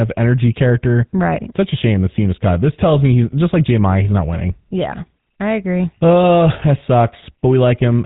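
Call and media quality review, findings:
GSM full-rate codec artefacts, whole clip: buzzy, gravelly speech, nothing above 4 kHz. Regular-pulse excitation of vocal-tract model; roughness, not the warbling of other low-rate codecs. Plainly audible damage, consistent with 13 kbps.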